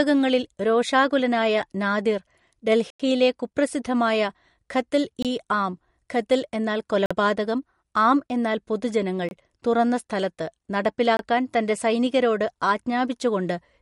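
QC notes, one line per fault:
Throughout: MP3 compression, likely at a low bitrate around 48 kbps; nothing above 11.2 kHz, with watery, swirling treble as weak frequency lines drop in and out between frames.
2.90 to 2.99 s, 5.22 to 5.25 s, 7.06 to 7.11 s, 9.29 to 9.31 s, 11.17 to 11.19 s: block of digital silence, hard cuts to silence lasting 93, 23, 46, 23 and 23 ms; the longest falls just before "കുപ്രസിദ്ധമായ ഖത്ൽ ഇ ആം", another just after "ഇ ആം ഖത്ൽ എന്നാൽ", the last before "തൻ്റെ സൈനികരോട്"; lengths fit 1024-sample buffer multiples.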